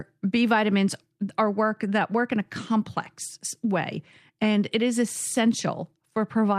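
Nothing in the recording calls for comment, since there's no technical fault anywhere in it.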